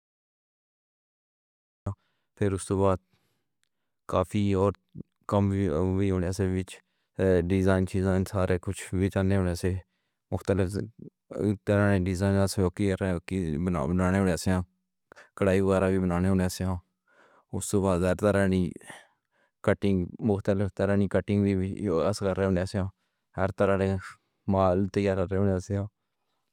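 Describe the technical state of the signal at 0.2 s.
At 0.2 s the signal is digital silence. This is a cut-off start, running from 0.0 to 1.86 s. Capture began late, so the speech enters abruptly mid-sound at 1.86 s, just before "پھر اوس دے بعد", with no natural attack.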